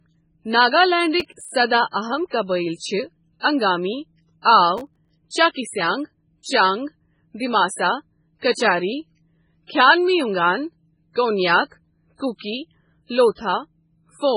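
This speech clip is carrying MP3 compression damage all the way through. Nothing comes through above 10.5 kHz, and the treble has that watery, swirling quality where weak detail flickers in and out from frame to frame. The s sounds pick up a metallic edge. That's heavy codec damage, and the most likely cause is a very low bitrate, around 16 kbps, where the encoder runs out of bits and starts throwing away whole bands. There are two bursts of processor overload crackle, one from 1.2 to 1.51 s and another from 4.78 to 5.09 s. Each one is a gritty, tearing crackle laid over the speech for about a third of a second. It sounds like the machine couldn't fill its audio buffers in time, and a whole run of deadlines got missed back to back. The tiny gaps are consistent with buffers of a few milliseconds each, with maybe ten or so missed in the first burst and fifteen or so in the second. Each missed buffer drops to silence with hard edges, and all those little dropouts together add up to the crackle. 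At 8.52 s there's a bit of pre-echo, a short smear of hiss that arrives roughly 47 ms ahead of a sharp attack and softens it. The codec spreads its quantisation noise evenly over a whole block, so when the transient falls late in the block, noise sized for the loud part leaks into the quiet stretch just before it.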